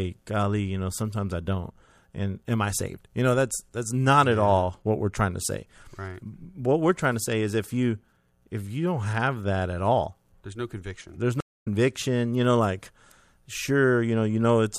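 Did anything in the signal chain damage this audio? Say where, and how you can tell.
Yes. At 11.40 s the speech drops out completely for about a quarter of a second, and when it returns at 11.67 s it has skipped ahead by roughly a fifth of a second, so a short stretch of the talking is simply missing. That is a stream reconnect at the network stage: the connection broke, the player fell silent, then rejoined the live stream further along and started a fresh decoder from that later point.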